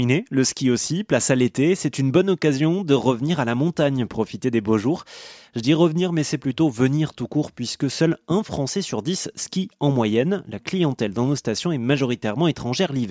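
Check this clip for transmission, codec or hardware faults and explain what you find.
Nothing stands out in this speech recording, so there's no fault to report here.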